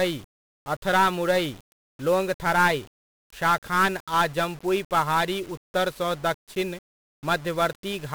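Throughout the clip, the speech has been squeezed through 1-bit DFPWM compression, where each sample keeps only a single up-or-down step for an adaptive tracker. The coarse stepping buries everything in dense, hissy, crackling noise, smearing the treble away, consistent with roughly a 48 kbps stream.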